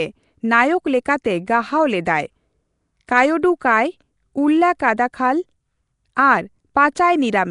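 Nellymoser compression runs throughout this speech clip, likely from Flash's Nellymoser Asao codec at a rate fitting 44 kbps. Its sparse bit budget leaves weak bands empty and noise-filled, giving a rough, hissy halo and a smeared, underwater sound, with nothing above 10.6 kHz.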